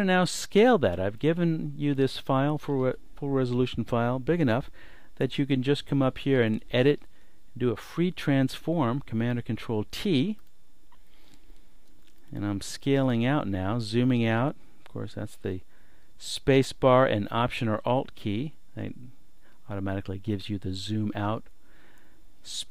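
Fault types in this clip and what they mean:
Nothing stood out on listening; there was no audible problem to point to anywhere in the clip.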